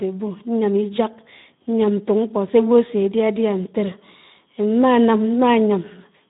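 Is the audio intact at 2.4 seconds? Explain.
No. At 2.4 seconds the speech carries Speex codec damage, as it does for the whole clip. Speex is a CELP coder. It models the voice with a filter driven by an excitation signal. Here too few bits go to that excitation, which fits a low setting near 11 kbps. The speech therefore sounds noisy and hoarse. Nothing is heard above 3.8 kHz, so the sound is also dull and narrowband.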